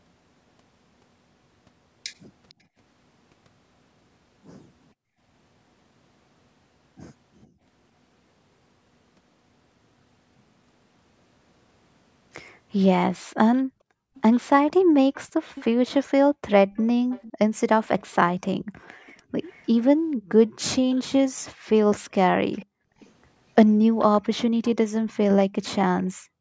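At 2.49 to 2.54 s a faint delayed copy of the speech appears, about 35 dB down and trailing by 452 ms. This is likely an echo leak, where the far end's loudspeaker is picked up by its microphone and not fully cancelled. The same echo returns more strongly, about 25 dB below the speech, from 14.15 to 19.67 s and again from 22.52 to 25.13 s.

The background is gated by the echo canceller at 4.94 to 5.21 s, 13.24 to 14.15 s, 18.6 to 22.99 s and 26.14 s to the end. Each time the canceller pulls the microphone down hard, by up to about 40 dB, so the room sound drops out for a few hundred milliseconds to around a second, then returns.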